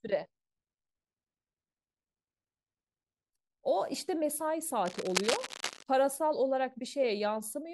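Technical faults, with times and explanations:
4.85 to 5.83 s, cable scratch noise: the problem is likely a worn cable, connector or control being shifted, so its contact resistance jumps about erratically for roughly a second. Those rapid resistance swings inject dense, irregular bursts of noise into the signal, sitting only a few decibels below the speech itself. The result is a harsh scratching, rustling layer that rides over the speech for that stretch and then stops.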